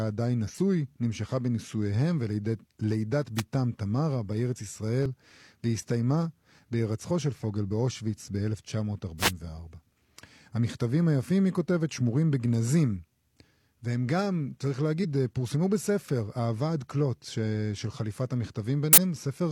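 At 0.45 to 0.51 s, and again at 5.06, 15.00 to 15.05 and 18.92 to 18.98 s, damaged data in a compressed stream makes the decoder misread frames and hunt for sync, giving a chirp, squawk, click or brief hole. Each shows as an abrupt vertical smear or gap in the spectrogram. Between these, at 3.35 to 3.43 s and 9.18 to 9.32 s, a wireless microphone noise hit occurs as the FM radio signal fades and receiver noise rises. It sounds like a swish or burst of static, seen as a broadband wash of noise over the speech in the spectrogram and a fuzzy thickening of the waveform.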